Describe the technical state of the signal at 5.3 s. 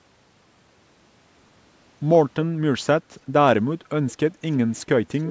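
At 5.3 s there is an echo leak, running from 5.15 s to the end at 5.30 s. A faint, delayed copy of the speech comes back about 339 ms late, roughly 15 dB below it. A loudspeaker echo canceller on one side of the call likely let it through.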